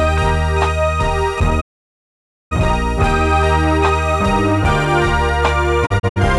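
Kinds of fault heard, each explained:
Digital broadcast dropout: the receiver mutes on bad frames, fading out in about 20 ms and losing that audio. Here a 0.9 s silence runs from 1.60 to 2.53 s, then brief holes from 5.85 to 6.18 s, showing as flat waveform gaps and blank spectrogram bands.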